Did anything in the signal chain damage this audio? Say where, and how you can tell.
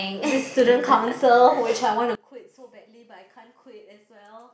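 Yes. From 2.15 s, the speech drops about 24 dB to a faint residue. One channel inverted, likely in analogue wiring, cancels in mono. The waveform shrinks and the spectrogram dims throughout.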